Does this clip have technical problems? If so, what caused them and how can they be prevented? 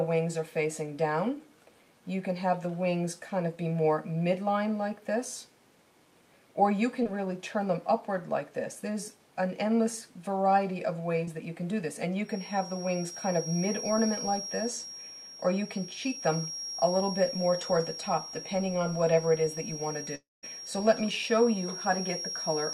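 Yes. Short concealed packet loss occurs at 7.03 to 7.07 s and 11.25 to 11.29 s. About 20 ms of data arrived too late each time, and the decoder extended the preceding sound before blending back, leaving a brief smear. A larger jitter buffer and forward error correction would prevent this.

A feedback whistle runs from 12.21 s to the end: a thin, steady 5.6 kHz tone roughly 10 dB below the signal, swelling and fading slowly in level. It is likely caused by loudspeaker output reaching the microphone with loop gain just under runaway. Headphones or proper echo cancellation would prevent it.

A long network dropout runs from 20.15 to 20.45 s. The sound is stretched into a fading buzz, then goes almost silent until the signal resumes, with the intervening material gone. This likely reflects a stall of nearly 0.3 s in packet delivery. A stable wired connection or less network congestion would prevent it.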